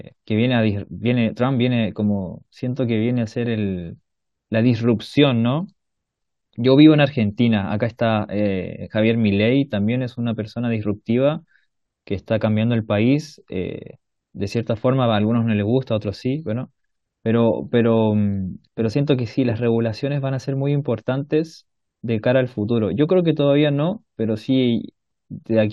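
The recording runs without any audible technical faults in the signal.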